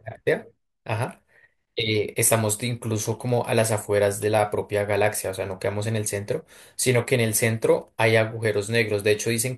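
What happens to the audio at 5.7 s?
Nothing goes wrong at 5.7 s: the speech carries straight through that moment with no dropout, click, glitch or change in level or tone.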